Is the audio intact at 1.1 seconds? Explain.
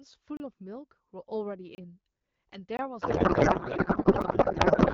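Yes, the audio is intact at 1.1 s, with no fault at that moment, only the AMR wideband (HD Voice) codec working as intended.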